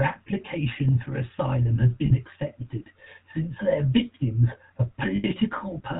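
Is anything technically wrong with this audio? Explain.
Yes. The whole speech clip carries GSM full-rate codec damage. The codec models the vocal tract and excites it with sparse, regular pulses, and nothing above 4 kHz survives. The result is a buzzy, gravelly roughness, which fits a 13 kbps GSM stream rather than the smeared, swirly sound of a modern low-bitrate codec.

There are lost GSM frames from 2.06 to 2.12 s (40 ms) and from 5.16 to 5.25 s (80 ms). Missing frames are filled by repeating the last good settings at falling level, so each gap becomes a brief metallic ring rather than a click or a silent dropout.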